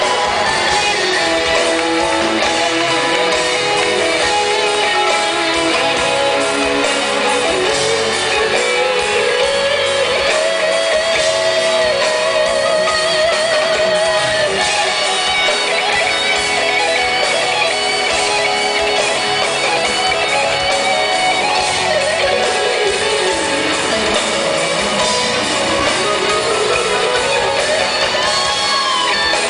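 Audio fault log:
No audible faults detected.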